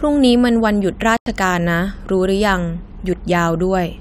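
A digital broadcast dropout runs from 1.17 to 1.27 s. The receiver stopped getting usable frames, through signal loss or failed checksums, and muted until clean frames resumed. The speech cuts to silence for about 96 ms, a gap consistent with a few lost frames, and that stretch is gone.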